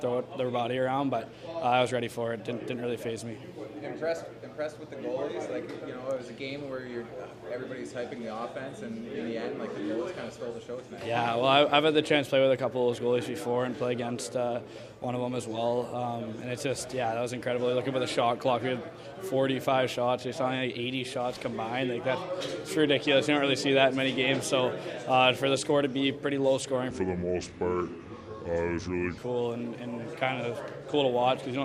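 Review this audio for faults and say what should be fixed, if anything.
From 26.90 to 29.18 s a section at the wrong speed plays at 0.715 times, about five semitones low; slowing and deepening together distinguishes it from pitch-shifting, likely from a mismatched clock. Confirm every section's sample rate matches the project clock before playback or export.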